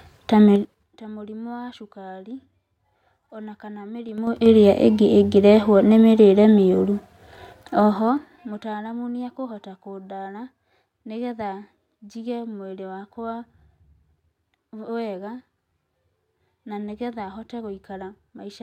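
A speech clip with zipper noise on three level moves: 0.56 to 0.93 s (roughly 25 dB down), 4.09 to 4.46 s (back up about as much), and 7.62 to 8.73 s (about 20 dB down). The gain jumps in unsmoothed steps of 6 dB, then 2 dB, around ten a second. Each jump clicks, giving that ticking.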